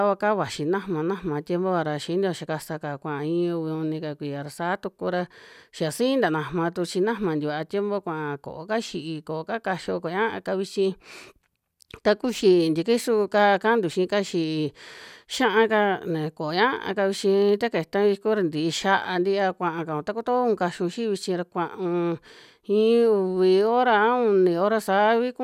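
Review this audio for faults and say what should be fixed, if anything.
No faults found; nothing needs fixing.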